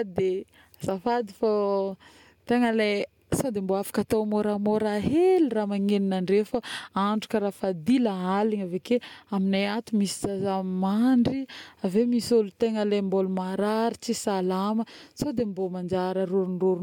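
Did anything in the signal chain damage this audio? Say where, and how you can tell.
No, nothing damaged this audio.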